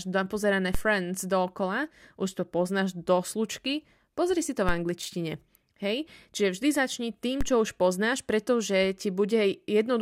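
Speech carrying three DC steps, at 0.75 s, at 4.69 s after "si to", and at 7.41 s between "vždy začni" and "čo už poznáš pretože". Each shifts the waveform's zero line by about −16 to −17 dBFS, then bleeds away as through a 5 Hz high-pass. The result is a low thump while the speech continues unaffected.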